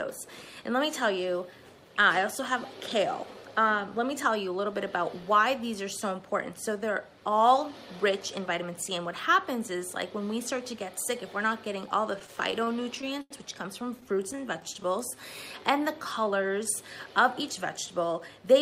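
From 12.19 to 13.32 s there is a repeated stall (stutter): twelve brief gaps where late packets drained the jitter buffer. The last sound is stretched over them, about 206 ms in total, with the longest hold 90 ms, so the audio drags and catches but loses nothing. A milder stutter follows from 14.00 to 14.86 s, with eight holds of 13 ms or less. Overlapping it, from 14.09 to 16.56 s, comes a jitter buffer slow-down. Short stretches are repeated to rebuild the reserve, adding about 164 ms. The sound plays at 94% speed with unchanged pitch, slightly drawn out.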